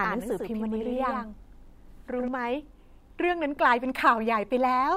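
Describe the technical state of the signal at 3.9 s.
At 3.9 s the speech signal is intact, with no technical fault present at that point.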